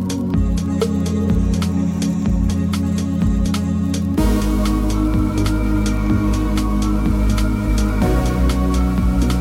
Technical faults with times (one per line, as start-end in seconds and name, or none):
none